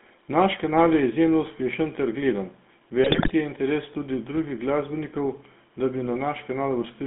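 GSM full-rate codec coding runs through the whole clip. The codec drives a vocal-tract filter with a sparse, regularly spaced pulse train, so the fine detail of the excitation is thrown away and the speech takes on a buzzy, gravelly grain that is plainly audible. The band is also narrowed to telephone width, roughly 200 Hz to 3.6 kHz, leaving the speech thin and boxy. The character points to the 13 kbps full-rate coder.

GSM bit errors break up the speech from 3.04 to 3.33 s. Across this stretch, corrupted bits reached the decoder at a fairly heavy rate, about 3.5 percent, and damaged the filter, pitch and gain values of successive frames. Each hit frame decodes with a bent spectrum or a sudden jump in level, so the speech turns into a burst of squawks, pops and gargling for just under a third of a second. That span fits roughly a dozen or more consecutive 20 ms frames.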